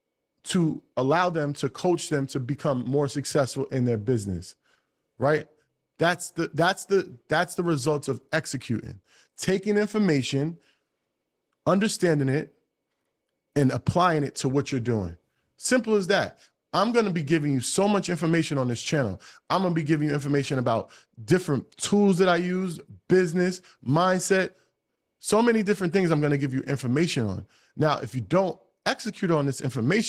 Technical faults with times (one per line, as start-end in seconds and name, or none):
0.00-30.09 Opus voice compression